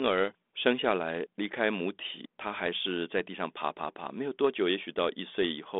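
Nothing stood out on listening to this speech recording.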